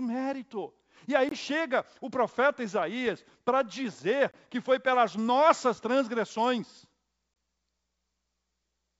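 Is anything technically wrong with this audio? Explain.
Yes, there are two problems, both short.

First, gaps between chunks. At 1.29 s, just before "chega o profeta", at 4.31 s, between "para dizer" and "que foi pelas nossas", and again at 7.34 s, the sound drops to silence for about 23 ms. They're spaced 3 s apart, which fits audio handled in 3-second chunks, with a bit of silence left at each join by padding or a late start. Nothing is lost, but the flow gets punched with little holes.

Second, bit errors on an ADPCM link, at 3.06 s, between "chega o profeta" and "para dizer que foi". You get a quick pop with a rough, gritty edge and a brief jump in level. The error rate is very low, well under one percent. Each flipped bit throws off the decoder's step size and prediction, so the damage rings on for a few milliseconds rather than being one clean click. It sounds like it landed across three frames. 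The link itself is G.722 wideband coding, and it sounds like it's running at 64 kbit/s with little or no coding damage of its own.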